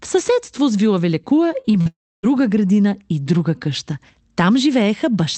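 From 1.61 to 1.87 s there is repeated packet loss with a robotic sound. Four short holes, the longest about 41 ms, are each patched by stretching the previous sound, so over a third of that span turns choppy. Real speech returns between the patches, unlike a single long dropout.

From 1.87 to 2.25 s comes what is likely a long network dropout. A brief fading buzz gives way to about 0.28 s of silence, and the speech resumes at "градина и друга къща" with the missing part gone. This is one unbroken hole, not a string of short ones.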